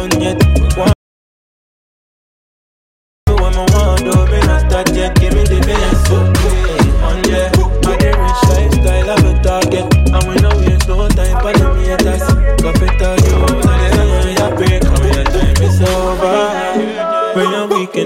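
At 0.93 s the sound cuts off abruptly and stays gone until 3.27 s. That's an audio dropout to silence lasting about 2.34 s. The gap is dead silent, with no room tone or hiss underneath, so it's not just a quiet passage. The likely cause is the input going missing, maybe a device dropping out or a momentary mute, while the recorder kept writing blank samples. Whatever happened in those two-odd seconds is simply lost.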